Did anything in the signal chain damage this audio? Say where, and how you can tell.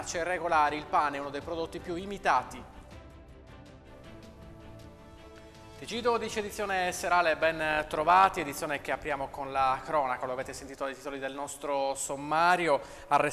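Yes. From 7.71 to 8.51 s the sound takes on a metallic buzz with extra tones around each note, the level pulsing around a hundred times a second with swings of about 6 dB. This is overlap-add ripple from a frame-based processing stage whose windowed frames were rejoined with overlaps that don't sum to constant gain.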